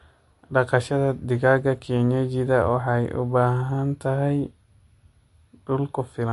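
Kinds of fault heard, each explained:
MP3 compression: The speech has nothing above 11.3 kHz, so the top end stops at a hard ceiling. The damage is plainly audible throughout the clip. The sound has a watery, swirling quality, because weak frequency lines drop in and out from frame to frame. The likely cause is MP3 encoding that runs short of bits. The sharp treble cut-off and plainly audible artefacts point to a low bitrate, in the region of 47 kbps.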